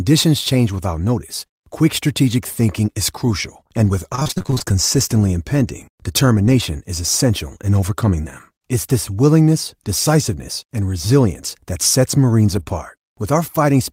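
Repeated packet loss (robotic sound) runs from 4.15 to 4.74 s, right after "is crucial and with" and ending before "impending determination is essential". Across that stretch the stream kept dropping out in short holes, the longest about 24 ms, and each was patched by extending the preceding speech before the next hole arrived. Roughly half of that span is filled-in sound, so the speech turns choppy and mechanical, with a robotic edge and fragments missing.

A lost packet rebuilt from error correction appears at 12.51 to 12.61 s, just after "and resilience that sets", and again at 12.68 to 12.74 s. In both places audio went missing, but a reduced-quality backup copy carried in the following packet (Opus in-band forward error correction) was decoded instead. The first repair covers 60 ms, consistent with three packets, and the second 40 ms, consistent with two. Nothing drops out, but those moments sound coarser and grainier than the surrounding speech.

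Short concealed packet loss sits between the two repairs, from 12.63 to 12.68 s. Here no backup copy was available, so about 20 ms of missing audio was covered by extrapolating the last sound and then blending back into the real signal, leaving a brief smear or wobble in the speech.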